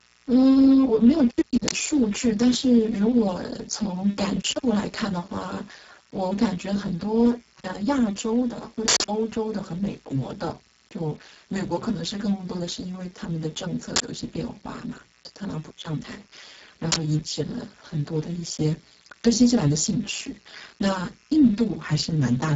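From start to finish, a steady, raspy mains buzz sits roughly 30 dB below the speech. Spikes leaking in twice per 60 Hz cycle stack harmonics into a ladder of evenly spaced horizontal lines on a spectrogram, climbing well into the kilohertz range.

Also throughout, heavy Speex codec damage makes the speech hoarse, noisy and edging toward robotic, which points to a very low setting around 5.8 kbps. Too few bits reach the excitation. On a spectrogram, harmonics smear into grainy texture, the upper band is only a shaped noise fill, and nothing appears above 7.7 kHz.

Four uninitialised buffer bursts follow, at 1.68 s, 8.88 s, 13.96 s and 16.92 s. Leftover memory was played as samples, giving sudden, loud digital noise lasting 40 ms, except 160 ms at 8.88 s. These show as rectangular blocks on a waveform and bright vertical bands on a spectrogram.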